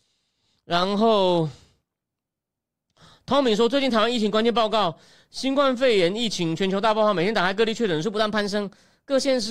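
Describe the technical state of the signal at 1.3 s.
At 1.3 s the speech signal is intact, with no audible fault at that moment.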